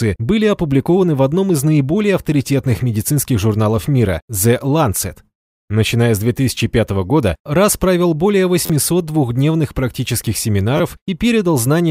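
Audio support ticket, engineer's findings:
Repeated buffer, 8.66–8.70 s: brief buzzy stutter, one ~11.6 ms block played three extra times. Fits a 512-sample buffer. Playback underrun, device re-sent last buffer. Waveform: identical copied cycles, step at each join; spectrogram: vertical click lines. Roughly 40 ms lost.

Repeated buffer, 10.77–10.80 s: shorter click-buzz, same block size, two extra plays. Same underrun mechanism. Spectrogram: repeated identical slices between vertical lines. About 20 ms lost.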